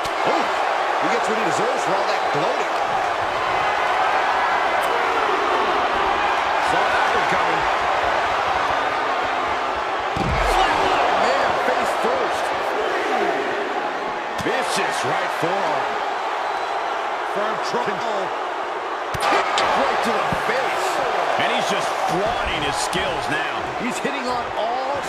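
Frames out of order crop up three times: 16.06 to 16.44 s, 17.64 to 18.02 s, and 19.21 to 19.61 s. Each time, two neighbouring runs of frames, roughly 0.19 s each, got decoded in swapped order, so the second half of the stretch plays before the first. You hear a short garbled flutter where the sound jumps ahead and then back. Nothing's actually missing, and the timing picks up normally right after each one.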